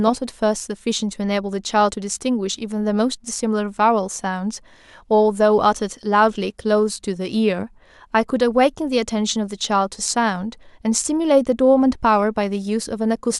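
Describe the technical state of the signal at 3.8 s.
At 3.8 s the speech signal is intact, with no fault to be heard at that moment.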